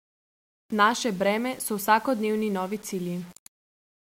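From start to finish, the speech carries a grainy, rough distortion that shifts with the sound. Quiet passages and decaying syllable tails turn gritty. The softest moments sputter or drop to silence. The likely cause is low bit depth without dither: samples rounded to about 7 bits, with no added noise to smooth the steps. The rounding error follows the signal, so it sounds like distortion. It sits only around 30 dB below the speech.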